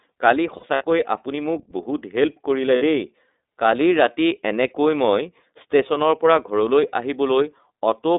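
The whole clip passes through the iLBC codec. The speech is confined to a narrow line band of about 250 Hz to 3.7 kHz and has a plainly rough, slightly synthetic texture. That fits iLBC's 13.33 kbps mode with 30 ms frames. Unlike a generic low-pass, the roughness sits inside the band.

From 0.56 to 0.83 s, lost iLBC frames break the speech. Gaps totalling 120 ms are scattered over about 240 ms, the longest around 70 ms. The decoder fills each gap with a repeated pitch cycle blended with noise, heard as a brief buzzy held vowel. At 2.76 to 2.83 s a single 60 ms gap sounds the same way. Unlike concealment in codecs that depend on earlier frames, the speech sounds right again immediately after each gap.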